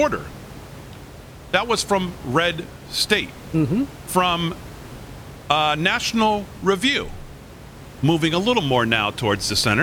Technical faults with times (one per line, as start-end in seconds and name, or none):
none